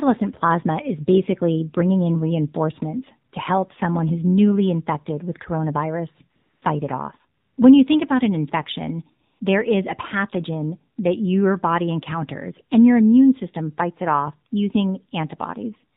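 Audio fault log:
throughout: AMR narrowband mobile codec. The speech is dull, with nothing above 4 kHz. Voicing sounds buzzy and synthetic because a coarse vocal-tract model rebuilds each frame from few pulses. The damage is plainly audible, which fits a low rate near 7.4 kbps.
6.36–6.62 s, 7.40–7.58 s, 9.28–9.40 s: AMR comfort noise. Smooth, steady hiss replaces the real background for 260, 180 and 120 ms. It follows "newly infected with coronavirus", "it off" and "think about an infection". Speech frames stopped, so the receiver synthesized filler noise.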